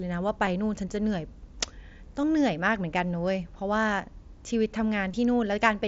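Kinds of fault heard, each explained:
Concealed Bluetooth headset packet loss: packets dropped on the headset link and the phone filled each gap by repeating a matching slice of the waveform just before it. Here the gaps are brief, at 0.46 s (7.5 ms) and at 2.22 and 5.12 s (15 ms each), so the single loss is nearly hidden while the two-frame runs come through as a short buzzy tone in the mSBC wideband sound.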